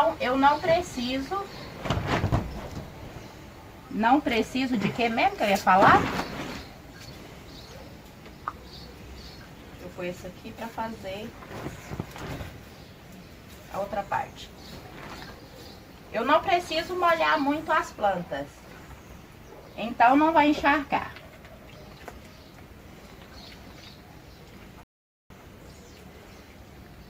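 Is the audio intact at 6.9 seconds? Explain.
Yes, the audio is intact at 6.9 seconds, with no dropout, click, distortion or other fault at that moment.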